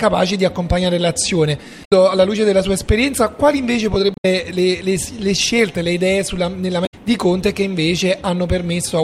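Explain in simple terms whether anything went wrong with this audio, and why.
Three short glitches interrupt the sound, at about 1.81 to 1.92 s, 4.14 to 4.25 s, and 6.83 to 6.94 s, each lasting roughly a tenth of a second. They come from damaged data in a compressed stream: some of the stored bytes were corrupted, so the decoder could not read those frames properly. The sound broke up briefly until it found the start of the next good frame and resumed normal playback.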